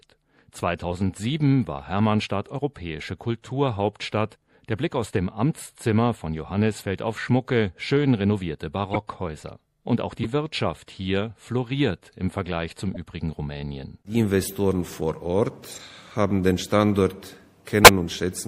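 From start to finish the sound has a watery, swirling texture, with the top end dulled and fine detail that flickers in and out, while sharp attacks lose their edge. This is most likely MP3 compression at a low bitrate, consistent with roughly 64 kbps. With too few bits, the encoder cuts off the treble and drops quieter frequency components, and those components switch on and off from one frame to the next.

Brief chirps and bursts of noise break through at 6.79–6.82 s, 8.92–8.96 s, 10.23–10.25 s, 12.94–12.97 s, 14.42–14.47 s, 15.72–15.80 s and 17.84–17.88 s. Each lasts between about 20 and 80 ms. These are corrupt frames decoded without being caught: damaged data puts energy at the wrong frequencies for the length of a frame or a few. Most are moderate, but the one at 8.92 s is loud, and the final one at 17.84 s is the loudest of all.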